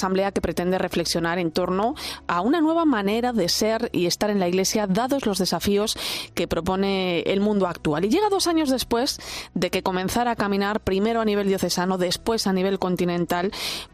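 No dropouts, clicks, level jumps, distortion or timing glitches turn up anywhere in the recording.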